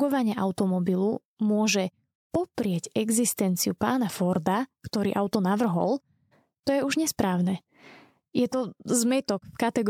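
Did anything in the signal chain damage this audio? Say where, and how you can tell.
No, nothing in the chain damaged this speech.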